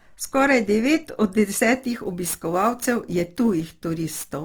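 From the start, the speech sounds grainy and rough, likely from Opus compression in its music mode at a low rate near 24 kbps; the spectrogram shows content reaching 20.2 kHz.

From 1.76 s to the end, sample clock jitter adds hiss, roughly 20 dB below the signal, from timing errors of around 10 microseconds. It appears as fuzz tracking loud, bright sounds.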